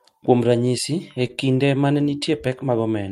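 At 1.27 s, between "ranyisi e" and "kinde ma ne", there is a short stall from a late packet. The jitter buffer ran dry, so the receiver held the last sound for about 18 ms, then resumed where it left off. Nothing is lost, but the sound briefly drags with a faint buzz or dip.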